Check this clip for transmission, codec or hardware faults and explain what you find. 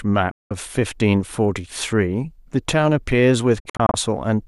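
Two digital broadcast dropouts. At 0.31–0.51 s the speech mutes for about 190 ms behind a 3 ms fade. From 3.60 to 3.94 s several short holes, the longest 48 ms, remove about 170 ms in total. Each time, the receiver lost the signal or rejected corrupted frames and muted until valid data resumed, so the speech sent during those gaps is gone.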